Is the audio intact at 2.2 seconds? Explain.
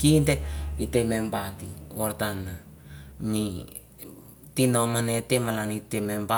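Yes, the speech at 2.2 seconds is intact, with no audible fault at that moment.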